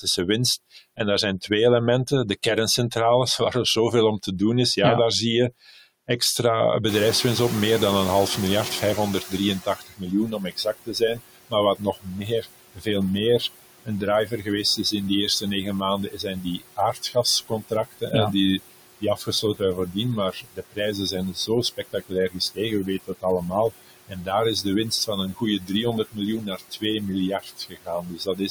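Noise suppressor artifacts run through the whole clip. The background is pulled down by about 18 dB, sinking in pauses and rising under the speech. Unlike a gate, the noise is never fully silenced.

From 0.71 to 1.51 s and again from 5.51 to 6.21 s, speech is cut by the noise suppressor. The suppressor mistakes soft speech for noise. It drops it by about 14 dB in the first stretch, about 11 dB in the second. Each time only a fifth of a second or less is affected, so word edges sound swallowed rather than the whole passage going quiet.

Around 7 s the room noise jumps by about 20 dB. From 6.88 to 9.82 s the noise suppressor is catching up. Its noise estimate lags, so the louder background leaks through first and then sinks by about 14 dB over roughly 2.9 s. This is a gradual fade after a step, not steady flutter. Once settled, the room noise sits about 13 dB below the speech.

From 9.28 s to the end at 28.49 s, speech is cut again by the noise suppressor, now far more often. 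Around 7 s of speech in total is pushed down, by up to about 22 dB. Quiet consonants and endings fade with the background.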